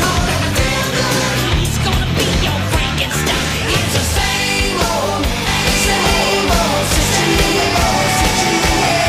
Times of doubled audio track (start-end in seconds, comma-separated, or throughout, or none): 5.47-9.09